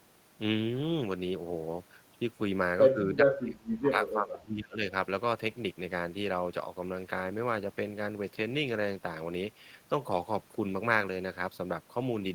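From 2.91 to 4.82 s the speech sinks in patches, up to roughly 35 dB down. This is likely speech suppressed in double talk, where an echo canceller confused the talker with loudspeaker echo.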